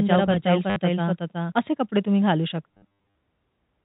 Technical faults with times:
0.00-1.52 doubled audio track
0.70-0.76 packet loss with last packet repeated
2.71-3.15 packet loss with last packet repeated

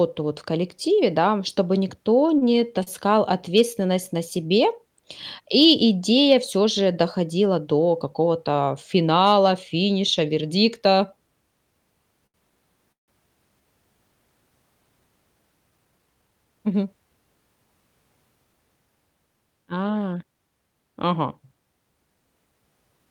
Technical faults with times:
2.38-2.43 short stall from a late packet
2.83-2.88 short stall from a late packet
12.26-12.36 short stall from a late packet
12.92-13.10 call audio freeze
15.71-16.89 jitter buffer speed-up

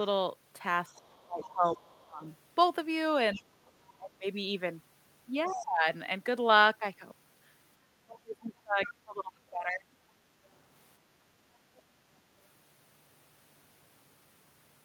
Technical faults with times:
0.89-2.23 speech suppressed in double talk
0.94-2.03 other side's voice leaking through
3.34-3.92 other side's voice leaking through
3.35-4.25 speech suppressed in double talk
5.46-5.64 other side's voice leaking through
5.47-5.87 speech suppressed in double talk
7.96-9.88 speech suppressed in double talk
8.85-8.91 other side's voice leaking through

